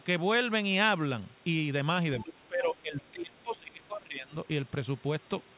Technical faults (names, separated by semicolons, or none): other side's voice leaking through; speech suppressed in double talk